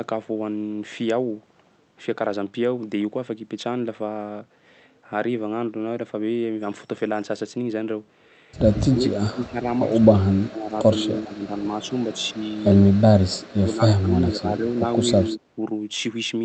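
Speech suppressed in double talk hits from 8.71 to 13.09 s, briefly at 13.26 s, and from 13.68 to 15.57 s. The level drops by up to about 30 dB, and the speech thins and breaks up, likely an echo canceller ducking everything while both sides talked.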